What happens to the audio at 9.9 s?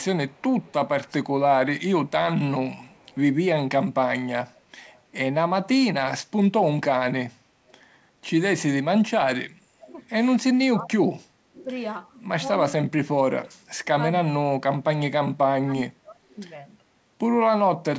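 Around 9.9 s the sound is being pulled down by speech suppressed in double talk, which runs from 9.51 s to 11.14 s. The level dips sharply, at its deepest by roughly 30 dB, and is affected in pieces adding up to around 0.7 s. This is likely an echo canceller that could not tell the near talker from loudspeaker echo while both sides spoke, and so attenuated everything. On a waveform the envelope shows sudden notches and gaps. A spectrogram shows the energy, especially the upper bands, fading in patches.

Inside that stretch, from 9.86 s to 9.94 s, there is a brief echo leak. A faint delayed copy of earlier sound, lagging by 339 ms and about 25 dB below the main level, slips through. Its likely cause is residual loudspeaker pickup that the canceller did not fully remove. It is heard as a brief scrap. On a spectrogram it appears as a weak repeat of an earlier pattern, shifted about a third of a second later. 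The waveform barely shows it.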